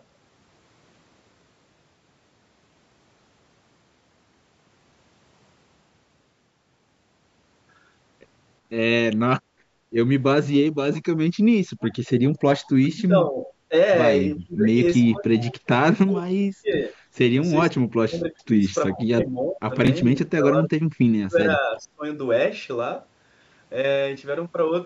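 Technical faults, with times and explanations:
9.42 to 9.91 s, background gated by the echo canceller: room sound dips by about 8 dB for roughly half a second while the canceller clamps the microphone, then recovers.
10.94 to 11.01 s, 11.81 to 12.72 s, 13.46 to 13.53 s and 18.91 to 18.96 s, echo leak: a faint copy of the far-end speech arrives 381 ms late, about 20 to 30 dB below the talker, likely residual echo the canceller failed to remove.
12.78 to 13.74 s, 14.43 to 16.94 s and 17.72 to 22.04 s, speech suppressed in double talk: the talker's speech dips or breaks up, by roughly 30 to 35 dB at worst, likely because the canceller attenuated everything during overlapping talk.
19.85 s, chunks out of order: a 10 ms block plays two blocks late, giving a brief jumbled moment.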